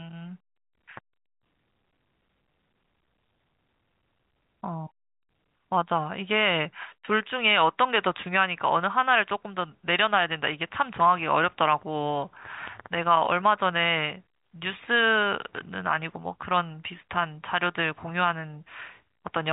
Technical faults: none

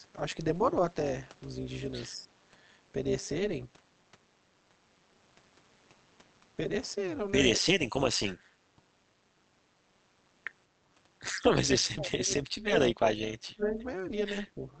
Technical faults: overlap-add ripple; speech suppressed in double talk

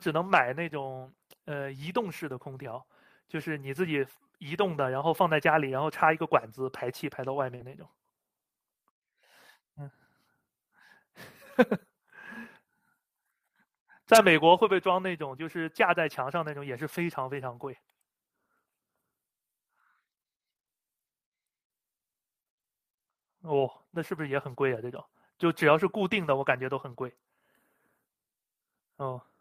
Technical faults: short concealed packet loss; lost packet rebuilt from error correction

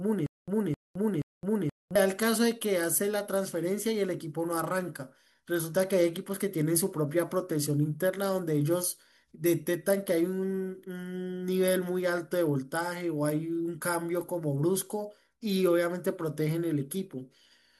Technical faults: stutter with silent gaps

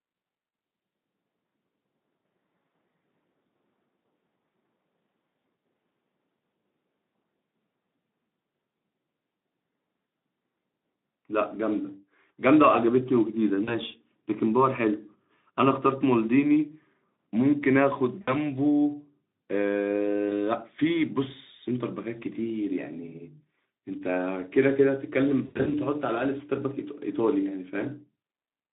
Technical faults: VoIP packet loss concealed by the speech codec

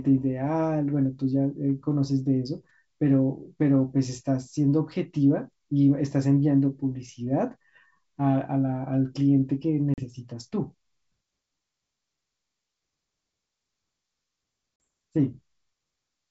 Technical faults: packet loss on an ADPCM call

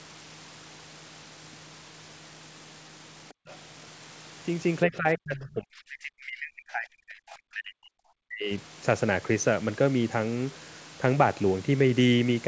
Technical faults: other side's voice leaking through; background gated by the echo canceller; speech suppressed in double talk

